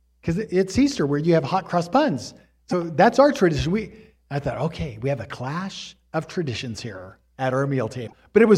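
Speech, with two brief glitches at 2.71–2.74 s and 8.06–8.13 s, likely a broken MP3 bit reservoir after cut frames. The audio skips forward and then glitches for roughly one to three 26 ms frames.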